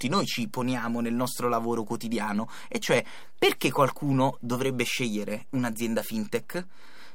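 From the first moment to the last, the speech sits on a DC offset of about -37 dBFS. The whole waveform is lifted off the centre line by a fixed amount, so it rides a little high or low the entire time. You won't hear that shift as a sound. It shows up as a steady spike at 0 Hz in the spectrum and quietly eats a bit of headroom on one side of the waveform.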